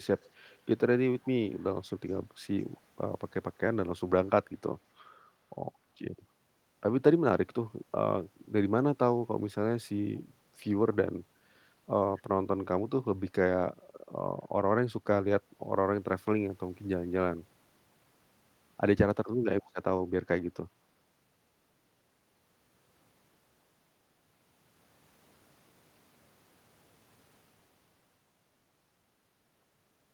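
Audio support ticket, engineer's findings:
Echo leak: loudspeaker-side echo canceller likely not fully removing its microphone pickup, residue sent back. Faint delayed copy of the speech, 214 ms behind, roughly 30–35 dB down, in short scraps at 0.18–0.62, 1.21–1.27, 1.49–1.64, 2.59–2.81, 12.17–12.22 and 19.63–19.71 s.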